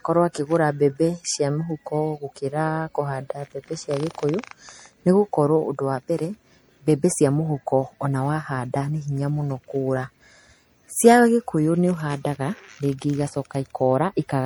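From start to end, the speech has a swirly, hollow, smeared quality, and its attacks blur. This is likely generation loss from about three MP3 passes near 64 kbit/s.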